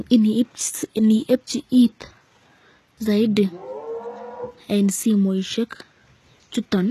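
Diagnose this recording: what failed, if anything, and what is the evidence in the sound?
The s sounds come across gritty and lispy through the whole clip, with treble that reaches high yet sounds synthetic and stops dead near 12.3 kHz. This is likely HE-AAC compression at the codec stage, at a low bitrate around 16 kbps, rebuilding the treble from copied lower bands.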